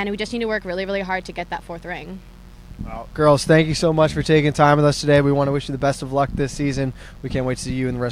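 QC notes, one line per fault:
Throughout: mains buzz. Sharp switching spikes from the 60 Hz supply, as from a dimmer, a rectifier or an unshielded cable, are getting into the signal path twice in every mains cycle. Because the spikes are so abrupt, they carry a dense stack of 60 Hz harmonics reaching up into the kilohertz range. The result is a steady, raspy buzz sitting roughly 30 dB below the sound and running under the entire clip.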